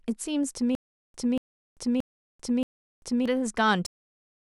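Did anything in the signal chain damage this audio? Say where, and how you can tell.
Yes. From 0.75 to 3.26 s there is a stutter with silent gaps: the same 235 ms fragment of speech plays four times, each followed by about 391 ms of dead digital silence, repeating every 626 ms. This is likely a stalled playback or stream buffer replaying its last fragment on each retry.

At 3.86 s the speech has a cut-off end. It stops mid-sound and drops straight to digital silence with no natural decay. This points to the playback or storage stage, where the final buffers were never written or played out.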